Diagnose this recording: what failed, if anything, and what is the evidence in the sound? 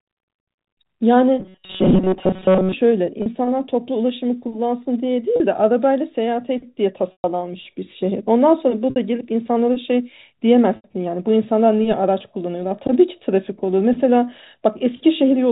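From 1.40 s to 2.73 s the sound turns into a rigid, metallic buzz fixed at 188 Hz. This is robotic sound from repeated short buffers, at the driver or buffer stage. The likely cause is audio arriving too seldom, so the player kept re-reading a stale block. A 188 Hz buzz fits a block of about 5.3 ms, and most of the real audio in that span is skipped rather than played.

In the network stage, five gaps show packet loss with pitch repetition at 3.22, 5.36, 7.12, 8.90 and 10.76 s, lasting 40, 40, 120, 60 and 80 ms. The concealment repeats the last pitch period. The 40 ms gaps come through as a briefly held buzzy tone. The 120 ms gap at 7.12 s outlasts the roughly 50 ms fade, so it drops to silence before a short cross-fade back. Each gap fits the loss of a few 20 ms packets. The 4 kHz telephone band of the G.711 coding is audible throughout.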